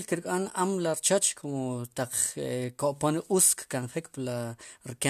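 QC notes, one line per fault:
Nothing stood out on listening to this speech clip.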